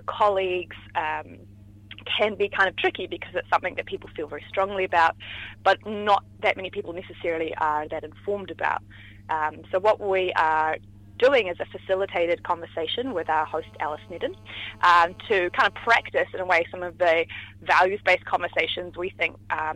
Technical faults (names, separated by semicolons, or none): GSM signalling bursts; GSM phone buzz